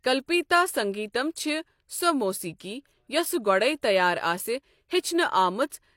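Pre-echo at 3.82 s: a sharp attack in the speech falls late in a transform codec's block, so quantisation noise sized for the loud onset also fills the quiet moment before it. About 14 ms of hiss leads the attack, which sounds softened and smeared.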